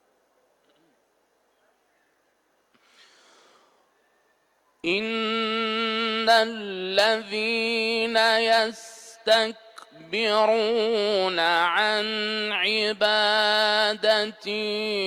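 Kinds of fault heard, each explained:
No kinds of fault are heard in this clip.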